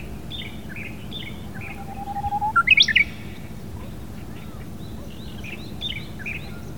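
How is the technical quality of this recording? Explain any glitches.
The technical quality holds up, with no glitches to explain anywhere in the recording.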